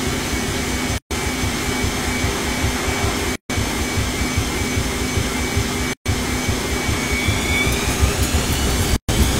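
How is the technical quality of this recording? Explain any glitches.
The recording is marred by four short dropouts, each a gap at a join of encoded pieces: 0.98 to 1.11 s (128 ms), 3.36 to 3.50 s (142 ms), 5.93 to 6.06 s (124 ms) and 8.96 to 9.09 s (125 ms). The audio was encoded in separate sections and joined without trimming, so each section's encoder start-up delay and final-frame padding stayed in. At each join the continuous sound cuts out to silence, with smeared edges, then resumes where it left off.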